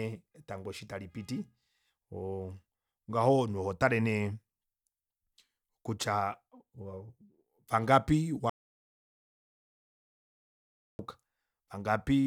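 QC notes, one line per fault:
8.50–10.99 s, audio dropout to silence: input likely lost while the recorder kept writing silence, so the speech cuts off mid-flow into 2.5 s of dead silence with no room tone.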